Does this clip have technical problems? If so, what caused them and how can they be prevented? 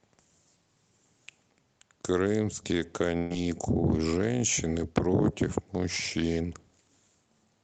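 Yes. A burst of packet loss at 3.17 to 3.33 s left the receiver stretching and fading the last sound for about 130 ms, skipping roughly 120 ms of speech. Forward error correction, larger jitter buffering and a steadier network path would prevent this.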